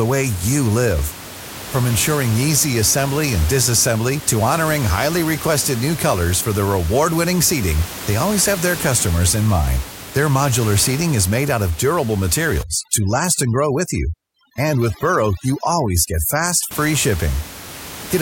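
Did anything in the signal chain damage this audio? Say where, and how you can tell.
Yes. In the call-processing stage, overdone noise removal from 12.63 to 16.71 s: the suppressor cuts individual frequency bands near its noise estimate, and the room noise, about 14 dB below the speech, drops and breaks up into twinkling specks.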